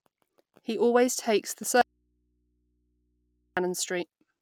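Right after "always take the", at 1.81 s, the speech drops out until 3.57 s, a gap of about 1.75 s holding only low hum some 45 dB down. It's an audio dropout to a faint residue, likely the signal path breaking while the input stayed live.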